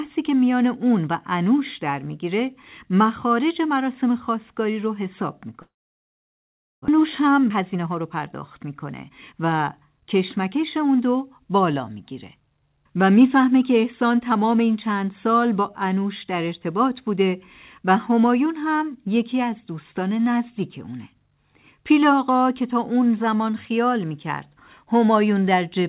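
At 5.62 s the speech breaks off. The last sound smears into a fading buzz, then near silence holds until 6.90 s, about a second of audio gone, likely a long network dropout. On a spectrogram, blurred harmonics decay into a blank column; the waveform flattens.

From 6.98 to 9.33 s a jitter buffer speed-up trims short pitch-period pieces to cut the built-up delay by around 0.2 s. The speech runs about 9% fast at unchanged pitch and sounds hurried. The spectrogram shows compressed syllables with steady harmonic spacing, all below the 4 kHz band edge.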